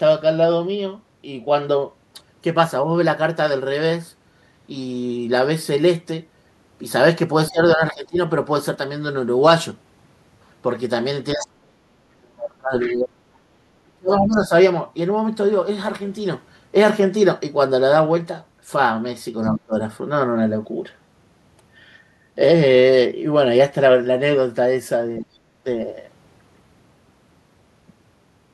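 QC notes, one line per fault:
7.5–8.18 s, 11.34–14.52 s, 19.55–19.75 s and 25.2–25.35 s, speech suppressed in double talk: the echo canceller likely mistook simultaneous talk for echo and clamped the microphone, so the talker's speech dips by roughly 20 to 35 dB in pieces, deepest and longest across 11.34–14.52 s.
11.41–14.38 s and 19.43–19.54 s, other side's voice leaking through: residual loudspeaker sound likely slipped past the echo canceller, so a second voice sits faintly under the talker, about 20 dB down for several seconds, then a brief scrap about 30 dB down.
13.47–13.52 s, background gated by the echo canceller: the canceller clamped the microphone while the loudspeaker played, so the room sound drops by about 12 dB for a moment and comes straight back once the canceller releases.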